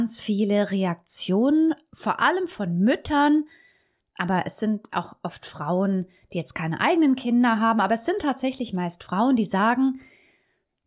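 Speech recording, no technical faults audible anywhere in the clip.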